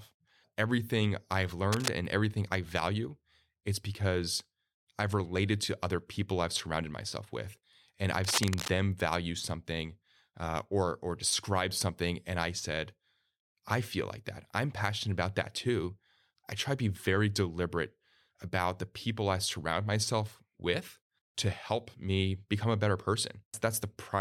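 At 1.72 to 1.90 s and again at 8.24 to 8.69 s there's cable scratch noise, ragged bursts of scratching over the speech, the first about as loud as the speech itself, the second a little quieter. That's likely a worn lead or connector being moved, its contact flickering.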